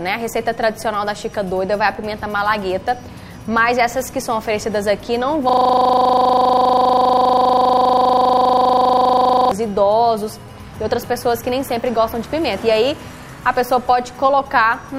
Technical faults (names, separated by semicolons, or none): system hang loop